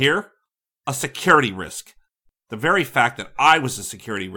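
Speech in which two unsynchronised clocks, likely about 100 ppm apart, slip one sample roughly every fifth of a second, producing faint regular clock slip clicks from 0.17 to 4.32 s.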